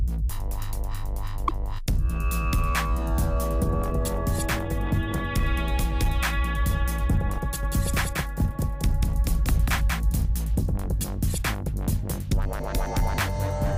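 At 1.45 to 1.51 s a short glitch breaks through the audio. This is damaged data in a compressed stream: corrupted bytes made the decoder misread the frames at that point, lose sync and hunt for the next valid frame header. A plain dropout would leave a silent gap, and a lone click would be a single sharp tick. This event instead comes from the decoder losing its place in the stream. From 7.63 s to 10.25 s a doubled audio track appears. A full-band copy of the same sound runs about a fifth of a second behind, roughly 5 dB below the original. It cuts in and out abruptly, most likely because a second, slower capture path or an edit left two out-of-step copies mixed together. A room echo or reverb would decay and take on room colouring. This copy does neither: it stays at a steady level, keeps the full bandwidth and holds a fixed time offset throughout.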